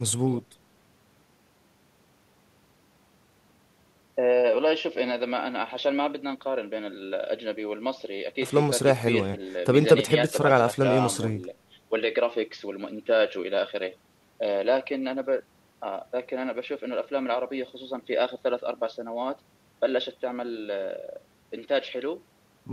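A recording of speech, with no audible technical faults anywhere in it.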